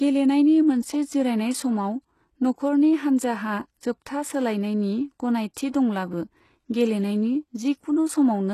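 From start to finish the speech carries plainly audible coding damage: the upper range sounds synthetic and grainy, with nothing at all above 12.3 kHz. This is likely HE-AAC compression at a very low bitrate, consistent with roughly 16 kbps. Only the lower spectrum is coded directly. The treble is rebuilt by copying lower bands upward under a coarse envelope, so the high harmonics no longer line up with the real ones.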